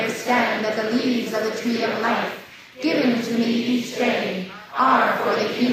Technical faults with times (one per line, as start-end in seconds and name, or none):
none